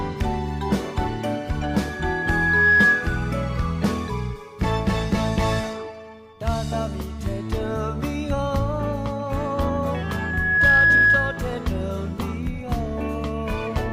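A single tone near 1.7 kHz swells over about a second from 1.62 s to 3.19 s, and again, rising faster, from 9.94 s to 11.54 s, peaking roughly 10 dB above the audio. This is loudspeaker feedback squeal: the microphone re-amplifies its own loudspeaker until that frequency runs away.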